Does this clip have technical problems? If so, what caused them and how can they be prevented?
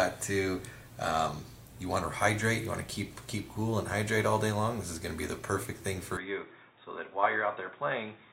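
Yes. From 6.17 s to the end at 8.33 s, the input likely switched to a poorer device, such as another microphone or a headset's call profile, which passes a narrower band. From that point the sound turns duller, with nothing above 3.8 kHz. The level drops by roughly 5 dB, and a new background noise sits around 45 dB below the signal. There is no gap at the switch. Locking the input device and disabling automatic device switching before recording prevents this.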